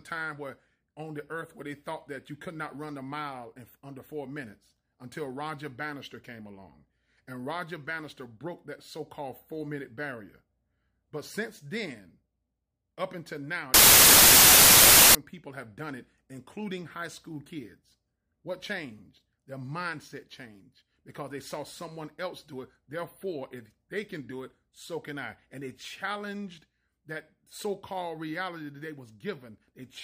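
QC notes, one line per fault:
13.74–15.15 s, samples built from the wrong bytes: for about 1.4 s the sample bytes are assembled misaligned or in swapped order, so the rapidly changing low-order bits land in the most significant positions, turning the audio into loud, harsh broadband noise.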